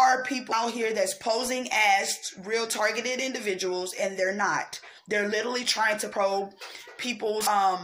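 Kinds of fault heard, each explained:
Compressed frames skipped: at 0.51, 4.97, 6.11 and 7.46 s, missing or rejected frames make the audio jump ahead roughly 70 to 150 ms. The jumps fit a 23.2 ms frame, and the overlap of neighbouring frames makes each join a smeared blip, not a click.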